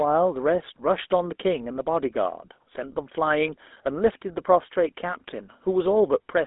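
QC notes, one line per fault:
Throughout: GSM full-rate codec. The speech sounds plainly buzzy and gravelly, with a narrow telephone tone running from 250 Hz to 3.6 kHz and nothing above 3.8 kHz. The grit comes from sparse pulse-driven excitation, fitting a 13 kbps GSM full-rate encode.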